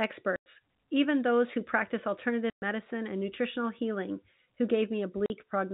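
At 0.36 s the speech drops out for 100 ms, just before "even those who practice". This is packet loss filled with silence. Packets never arrived, and the receiver played nothing in their place. A second hole of 120 ms follows at 2.5 s, between "even those who practice" and "and nutritional healing who". A 40 ms gap comes at 5.26 s. All three lengths fit a 20 ms packet size. Each gap starts and stops abruptly, on a narrow telephone-band G.711 signal.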